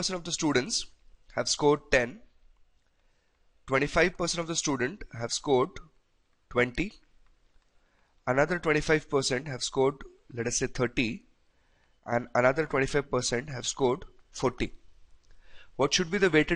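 One channel drops out from 11.99 to 12.12 s: the level falls abruptly by about 6 dB, then recovers, likely because the mono sum briefly lost half its input.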